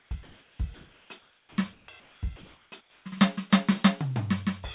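A sender likely halting transmission between musical phrases leaves comfort noise in place of the background at 0.0–0.11, 0.23–0.59, 0.74–1.1, 1.19–1.58, 1.73–1.88, 2.0–2.21, 2.36–2.72 and 2.81–3.05 s. Each time, the real background gives way to steady, featureless hiss that shifts in level by up to about 8 dB and, like everything else, stops at 4 kHz.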